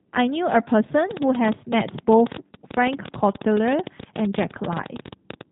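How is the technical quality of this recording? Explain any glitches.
The quality is poor: the whole recording is coded at low bitrate, and for most of its length a rapid ticking runs over it.

G.729 codec: Throughout, the speech sounds slightly rough and synthetic, with nothing above 3.8 kHz, which fits G.729 at 8 kbit/s. This VoIP codec rebuilds speech from a vocal tract filter, a pitch predictor and a few pulses per frame, so the fine detail of the voice is plainly lost.

Train of clicks: From 1.11 s to 5.42 s, around fifty sharp, similar clicks tick at roughly 12 per second with uneven spacing. They land in pauses as well as under the speech and reach well above its level. The likely cause is interference from nearby equipment or a faulty connection or power supply injecting a pulse repeatedly.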